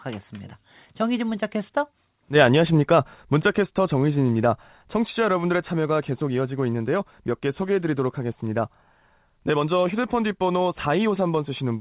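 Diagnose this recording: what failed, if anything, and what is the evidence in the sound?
Nothing has gone wrong here; the speech just has the narrow telephone sound you'd expect from a G.711 call path, with nothing above 4 kHz, which is simply how that codec works.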